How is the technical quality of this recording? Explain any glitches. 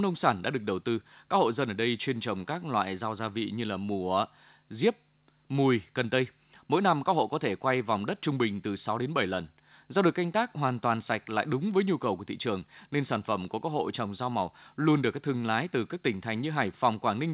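The technical quality is steady, with no glitches to explain, and the audio carries the narrow band of a call path, with nothing above 4 kHz.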